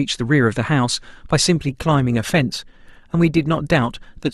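From 1.55 s to the end, the speech abruptly changes in quality with more codec artefacts, with no gap at the switch. This is an adaptive stream at a lower bitrate, consistent with Opus dropping from about 64 to 24 kbit/s when the connection slowed.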